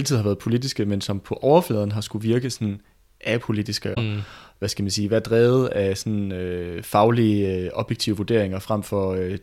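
At 3.93 to 3.98 s, the speech jumps ahead with a brief glitch. A broken MP3 bit reservoir is the likely cause, with 26.1 ms frames decoded from another frame's bytes.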